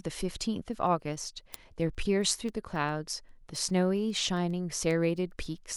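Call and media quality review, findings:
Word clock ticks, 0.20 to 5.7 s: sharp, uneven clicks about every 0.15 s, around forty of them under the speech. Probably an unlocked digital input. Clocks drifting roughly 150 ppm apart, slipping one sample each time.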